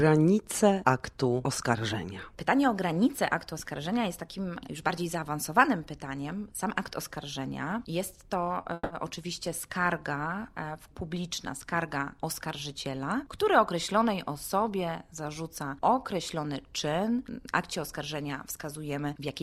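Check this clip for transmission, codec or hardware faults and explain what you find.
Two network-timing faults turn up close together, both near 8.6 to 8.9 s.

A short stall from a late packet occurs at 8.61 to 8.65 s. A packet missed its playout slot, the jitter buffer emptied, and the receiver stretched the last sound for about 20 ms until the packet arrived, then resumed from the same point. Nothing is lost, but playback now runs 20 ms later. It sounds like a sound held a touch too long, with a faint buzz or dip.

A call audio freeze follows at 8.73 to 8.92 s. The audio stops moving forward for about 170 ms, and the held sound turns into a fading buzz or hiss that drops to near silence for about its final 20 ms. Playback then picks up exactly where it halted, so nothing is skipped, and everything afterwards arrives 170 ms later. The likely cause is packets held up in transit until the jitter buffer drained, with the receiver concealing the wait by extending the last sound.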